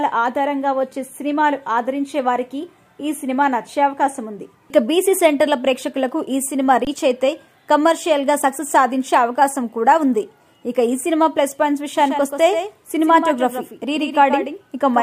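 At 6.85 s there's an underrun with a held sample. The output buffer ran dry for about 21 ms, which fits a 1024-sample buffer, and the converter just froze on its last value. The waveform flatlines, then picks back up, with roughly 20 ms of live audio gone missing.

From 11.98 s to the end you get a doubled audio track: a second full-band copy, around 10 dB down and trailing by roughly 150 ms, with no decay or room colour. It cuts in abruptly, likely from a slower second capture path picking up the same audio.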